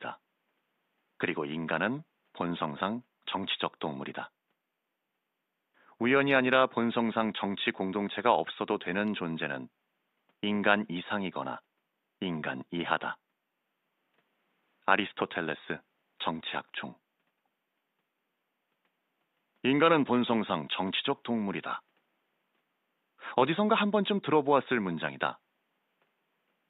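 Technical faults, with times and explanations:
No technical faults are audible.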